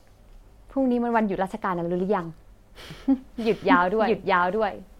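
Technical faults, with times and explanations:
2.91 s to end: doubled audio track. A slower second capture path likely mixed the speech in again, so an equally loud, dry copy abruptly starts trailing about 0.7 s behind.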